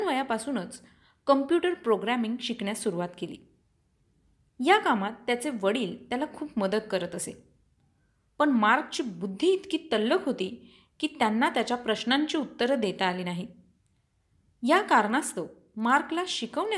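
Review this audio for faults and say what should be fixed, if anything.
From 14.9 s to the end at 16.77 s, the resampler restarted on every block, converting each 50 ms block without its neighbours. This points to a 48 kHz to 24 kHz conversion. Each block edge picks up a small error, heard as ticks repeating at 20 Hz. To prevent it, carry the resampler's filter history across block boundaries instead of resetting it for each block.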